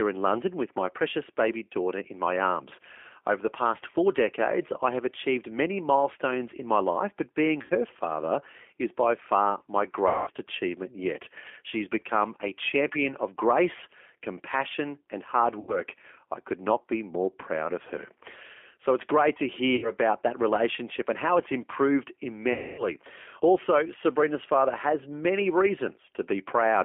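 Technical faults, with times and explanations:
throughout, G.729 codec: rough, slightly synthetic speech confined to about 250 Hz to 3.4 kHz, because G.729A at 8 kbit/s rebuilds each frame from a vocal tract filter, pitch predictor and a few pulses.
7.62–7.72 s, 10.08–10.31 s, 15.60–15.80 s, 19.76–19.91 s, 22.53–22.87 s, VoIP packet loss concealed by the speech codec: speech smears into a fading buzzy tone or coloured noise and stays weak for a moment after it resumes. The decoder is stretching its last pitch and filter over 60 to 250 ms of lost packets.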